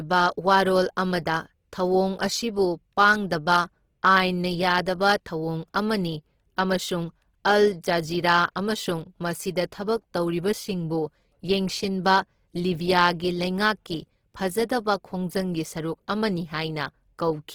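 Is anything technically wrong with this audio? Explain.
Yes. Throughout the speech, the audio has a rough, grainy, plainly noisy texture rather than the watery swirl of MP3. It is likely Opus compression in music mode at a low bitrate around 16 kbps, filling starved bands with folded or noise energy while keeping content up to about 20.2 kHz.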